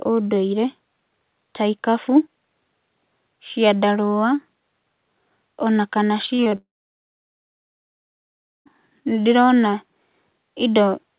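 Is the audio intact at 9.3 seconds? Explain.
Yes, the speech is intact at 9.3 seconds, carried through the call path with its narrowband telephone sound that has nothing above 4 kHz.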